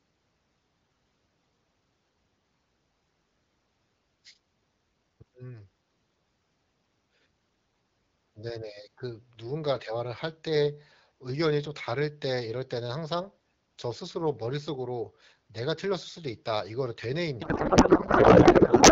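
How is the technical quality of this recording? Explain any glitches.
One glitch at the end affects the recording, which is carried over the AMR wideband (HD Voice) codec with light coding damage. From 17.41 s to 18.92 s there is a codec payload misread. The decoder unpacks the AMR bits in the wrong layout, which points to octet-aligned frames being read as bandwidth-efficient, and the speech turns into garbled noise and warble.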